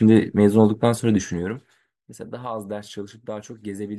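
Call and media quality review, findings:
Zipper noise, 1.20 to 1.85 s, during a level drop of roughly 15 dB. Audible ticking rides on the speech. Gain stage steps in 2 dB jumps, around twenty per second, unsmoothed. Each jump clicks.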